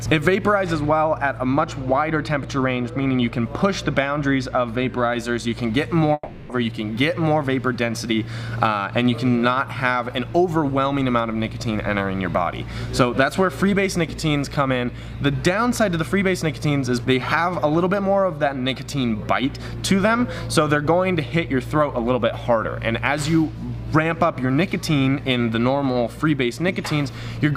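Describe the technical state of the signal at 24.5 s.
At 24.5 s the signal is intact, with no audible fault at that moment.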